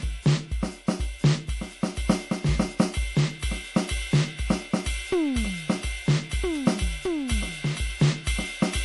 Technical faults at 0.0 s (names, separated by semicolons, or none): MP3 compression